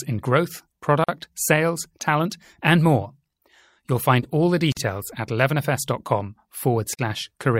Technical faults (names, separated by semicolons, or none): gap at a join of encoded pieces